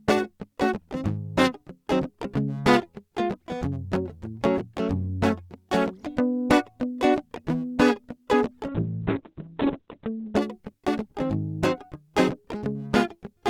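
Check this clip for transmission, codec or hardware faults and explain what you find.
One transmission fault affects the music: a call bitrate drop from 8.69 s to 10.41 s. The encoder's bit budget collapsed, consistent with roughly 48 kbps falling to about 6 kbps, so the audio band narrows from 20 kHz to 4 kHz and the music turns muffled and watery for about 1.6 s. Unlike packet loss, the sound stays continuous, with no gaps or glitches, only coarse until it recovers.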